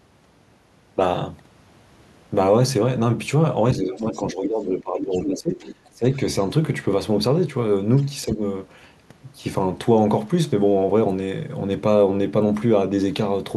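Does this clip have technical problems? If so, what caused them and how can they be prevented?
Yes. Speech suppressed in double talk: the speech dips from 3.8 to 5.59 s by about 15 dB at its deepest, then briefly at 5.93–6.05 s (about 15 dB) and 8.25–8.41 s (about 5 dB). The likely cause is the echo canceller turning everything down while both sides spoke. On a waveform the envelope caves in. Better double-talk detection in the canceller, or a headset, prevents it.

The other side's voice leaking through appears at 3.94–4.23 s (about −25 dB), 4.99–5.34 s (about −10 dB), 5.59–5.89 s (about −20 dB) and faintly at 7.97–8.03 s (about −35 dB). This is likely loudspeaker echo the canceller failed to remove. A spectrogram shows harmonic traces beneath the main speech. Headphones or lower loudspeaker volume stop it.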